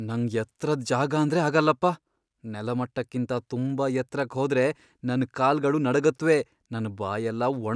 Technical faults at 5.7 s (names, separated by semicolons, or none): none